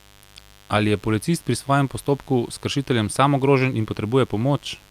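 From start to finish there's a mains buzz under the speech, built on a 50 Hz supply. It's not a clean hum. Something like a dimmer, rectifier or poorly shielded cable is letting sharp switching spikes in twice per cycle, so you get a 100 Hz pulse train full of harmonics stretching up into the kilohertz range. That's why it sounds raspy and edgy rather than smooth. It sits roughly 30 dB below the speech, steady the whole way.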